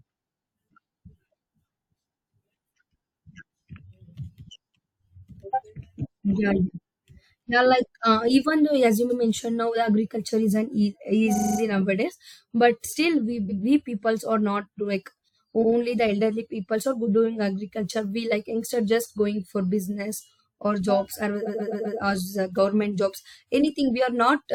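The speech stutters four times, with a short stretch replaying in place: at 9.09 s an 85 ms piece plays twice; at 11.35 s a 43 ms piece repeats five extra times; at 13.48 s a 128 ms piece doubles; and at 21.46 s a 128 ms piece returns four more times. These are repeated frames. Runs of compressed frames were written more than once, so the decoder replays them, stretching the audio by up to half a second.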